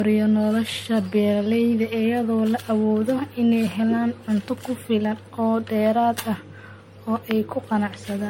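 Speech with generation loss running throughout: the sound is swirly, smeared and hollow, with blurred consonant attacks and nothing above 16.5 kHz. The likely cause is repeated MP3 encoding, around seven passes at roughly 60 kbit/s, each requantising on a shifted frame grid.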